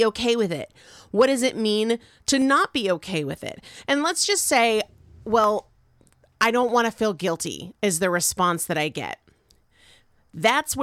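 Dropped samples at 2.42, 5.44, 6.69 and 8.19 s, the first between "does it mean to" and "be okay with it": each is a single sharp click in the speech, likely where a fraction of a millisecond went missing and the waveform jumped straight to a later value.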